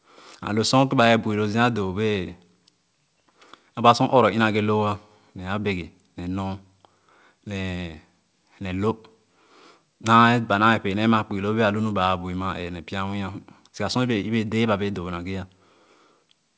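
No technical faults can be heard anywhere in the speech.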